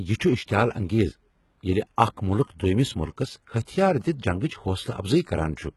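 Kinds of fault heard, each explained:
HE-AAC compression: Across the whole speech clip the treble is present but synthetic, with s sounds coming out gritty and lispy and nothing at all above about 11.8 kHz. This is likely HE-AAC at a very low rate, around 16 kbps, rebuilding the top band by copying lower bands upward under a coarse envelope. Unlike a plain low-pass or band-limited codec, the treble keeps its brightness but not its true detail.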